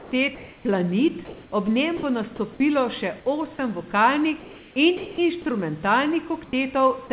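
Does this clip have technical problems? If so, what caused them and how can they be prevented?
Yes. Comfort noise in place of the background appears at 0.00–0.11, 0.35–0.65, 1.25–1.52, 4.40–4.76 and 6.44–6.53 s. These pauses were likely not transmitted, so the receiver filled them with synthetic noise within about 2 dB of the real level. On a spectrogram these stretches show smooth, uniform texture, and the waveform has an even, featureless envelope. Keeping transmission continuous by disabling discontinuous transmission prevents this.

The onset clipped by the voice detector comes at 0.63 s. Sound resumes abruptly after about 20 ms of its start was likely withheld by a slow detector and replaced with comfort noise. The waveform jumps straight to full amplitude, with no gradual rise. Adding detector look-ahead or a lower trigger threshold prevents it.

Sound dropped by the voice detector occurs at 1.97–2.03 s, losing about 30 ms, and at 4.97–5.18 s, losing about 100 ms. 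The detector likely mistook quiet sound for background and stopped sending. On a spectrogram the energy breaks off into flat noise, and the waveform collapses to a low, steady band. A longer detector hangover prevents this.

Throughout the clip, the call path's narrowband coding leaves nothing above 4 kHz, which fits G.711.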